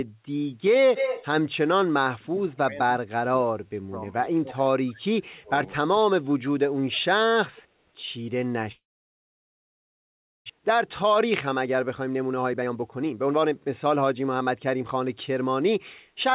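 From 0.95 to 1.26 s a second, fainter copy of the speech trails the original by about 200 ms, only about 5 dB below it, giving a brief doubled, smeared quality. This is an echo leak. The likely cause is a far end playing the call over a loudspeaker, whose echo canceller failed to remove what its microphone picked up and sent that copy back down the line.

Between 2.16 and 7.01 s the speech repeatedly dips, thins and breaks up in pieces: at 2.16 to 2.78 s, 3.06 to 4.05 s, 4.41 to 4.61 s, 4.8 to 5.08 s, 5.25 to 5.5 s and 6.09 to 7.01 s. The drops reach roughly 20 to 30 dB, deepest in the 3.06 to 4.05 s stretch, where about a second is affected. This is speech suppressed in double talk. Both sides were likely talking at once, and the echo canceller, unable to tell the local talker from loudspeaker echo, attenuated both.

At 8.72 s the audio turns into a fading buzz that sinks into silence, and nothing useful returns until 10.52 s. 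About 1.6 s of that gap is silent. When the speech resumes, roughly a second of it is simply gone. This is a long network dropout. Packets likely stopped arriving, and the receiver stretched the last sound out briefly before giving up. The stall also left the delay several hundred milliseconds longer than before.

From 10.59 to 15.69 s the speech runs noticeably hurried, about 14% faster than normal, yet its pitch stays put. This is a jitter buffer speed-up. After the dropout the receiver was holding far more audio than its target, likely from delayed packets arriving in a burst. To work the delay back down, it repeatedly cut out short pitch-period-sized slices, removing roughly 0.7 s in total. Throughout, the sound has nothing above 4 kHz, consistent with a narrowband call codec such as G.711.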